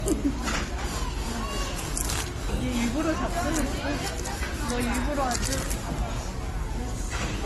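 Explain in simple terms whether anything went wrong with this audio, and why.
The whole clip sounds dull, with nothing above 12.1 kHz. That's likely transcoding between lossy codecs, squeezed twice with both sets of artefacts stacked.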